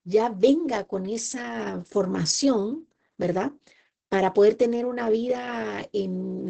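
From start to finish the speech carries heavy Opus voice compression in its SILK mode, with nothing above about 8.8 kHz, a wideband limit. The band edge alone does not set it apart from a simple low-pass filter. A low-pass would dull the sound but leave it clean. Here the excitation is coded so coarsely, as fits a rate near 10 kbps, that the voice turns hoarse and faintly robotic.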